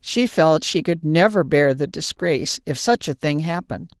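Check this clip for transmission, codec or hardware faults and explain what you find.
No faults found; the Opus voice compression, running at 20 kbps in hybrid mode, keeps the full band.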